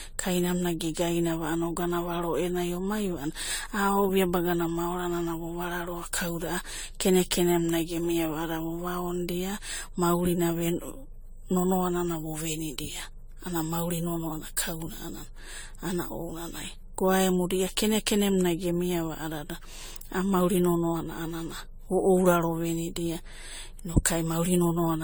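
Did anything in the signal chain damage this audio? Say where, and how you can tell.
Yes, at the codec stage. Generation loss runs through the whole speech clip. It sounds swirly, smeared and hollow, and consonant attacks blur, more than a 64 kbit/s AAC-LC encode alone would cause. The likely cause is repeated lossy re-encoding, perhaps five times, each pass adding fresh quantisation noise and spectral holes.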